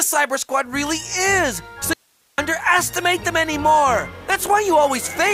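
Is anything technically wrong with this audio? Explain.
Yes. From 1.93 to 2.38 s there is an audio dropout to a faint residue. The sound cuts off abruptly for about 0.45 s, leaving hiss roughly 40 dB down, likely because the source was lost while the later path stayed live. Unlike a pause or fade, the break is instant and the gap still carries hiss.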